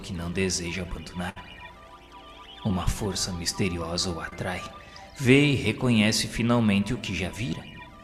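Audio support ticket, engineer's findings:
Burst of packet loss, 1.29 to 1.38 s. Receiver jitter buffer / concealment. About 60 ms never arrived; decoder extended the last sound for roughly 63 ms, fading it, then jumped ahead. Distinct from short loss: long enough to hear a held, decaying tail and a skip.

Short concealed packet loss, 2.68 to 2.72 s and 4.30 to 4.33 s. Same receive path. About 20 ms missing each time, patched from the preceding sound and blended back. Heard as a brief smear or wobble, not a sustained fade.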